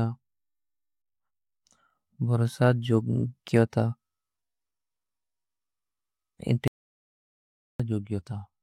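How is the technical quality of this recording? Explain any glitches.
The recording has one clear glitch. An audio dropout to silence runs from 6.68 to 7.80 s. The speech cuts off mid-flow into silence with no room tone, then resumes abruptly, losing about 1.12 s. The input signal was likely lost briefly while recording continued writing silence.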